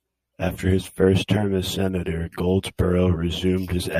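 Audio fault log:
Throughout: channel delay (comb filtering). One channel arrives around 10 ms behind the other, and when the two are summed to mono, the content they share cancels wherever the offset equals half a cycle. This produces a fixed series of notches starting near 50 Hz and repeating roughly every 100 Hz up through the spectrum. The speech therefore sounds hollow and phasey, with a colouration that stays constant for the whole clip.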